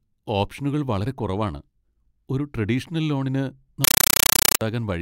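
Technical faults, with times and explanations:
3.84 to 4.61 s, compressed stream played as audio: right after "ഒരു ട്രെഡീഷണൽ ലോണിന്", undecoded AC-3 data bursts hit the output, 8 ms of harsh noise then silence, 31.25 times a second, so it chatters loudly.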